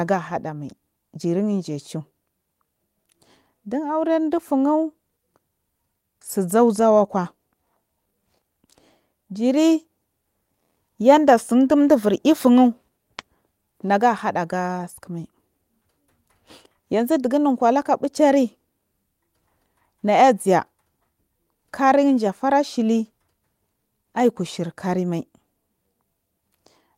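No technical faults can be heard anywhere in the speech recording; the signal stays steady and intact throughout.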